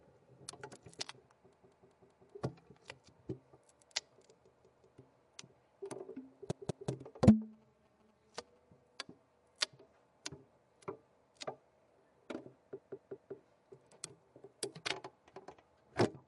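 A block of six compressed frames, lasting 192 ms, was sent repeatedly, which fits frames of about 32 ms. Each instance of these repeated frames is a stuttering loop: from 1.55 to 2.32 s (four extra plays), 4.59 to 4.98 s, 6.51 to 6.90 s (two each), and 12.78 to 13.36 s (three). In total the audio is about 2.1 s longer. From 7.53 to 8.58 s, a nearby 2G phone's GSM signalling bursts are picked up and rectified. They come through well below the sound as a galloping pattern of short 217 Hz buzzes.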